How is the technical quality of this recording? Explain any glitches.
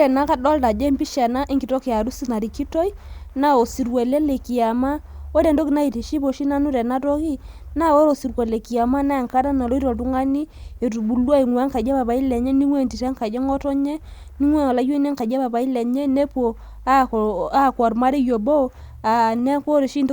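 No glitches or technical faults can be heard anywhere in this speech recording. Nothing in the audio breaks up or calls for an explanation.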